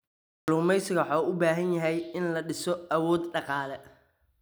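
At 0.38 s, right as the speech comes in after the opening pause, there's a clipped start after a pause: the output device had dozed off during the silence and took about 99 ms to wake, so the first sounds get swallowed and the speech pops in abruptly.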